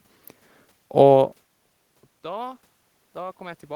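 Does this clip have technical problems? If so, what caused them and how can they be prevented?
Yes. From 2.22 s to the end, there is automatic gain rising. The input fell by about 23 dB, and the gain control responds by gradually raising its gain, so the sound and the room noise swell together. On a waveform, the envelope and noise floor ramp steadily upward. On a spectrogram, the background brightens evenly across all frequencies. Fixing the input gain manually, or disabling the automatic gain control, would prevent this.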